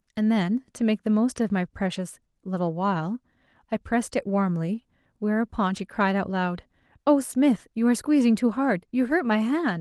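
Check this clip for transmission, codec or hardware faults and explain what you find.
No transmission, codec or hardware faults.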